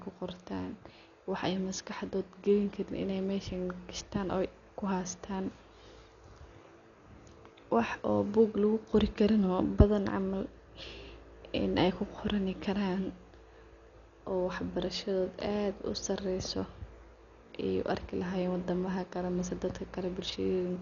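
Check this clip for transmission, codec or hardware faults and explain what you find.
One codec fault runs through the whole clip; no transmission or hardware faults stand out.

Dolby Digital compression, throughout: the speech is dull and band-limited, with nothing above about 6.9 kHz, and a rough, fluttering noise clings to voiced tones. The likely cause is an AC-3-style encoder starved of bits, which fits a bitrate around 48 kbps. It cuts off the upper band and leaves many frequency lines without mantissa data, so the decoder fills them with dither noise, and the damage is heavy.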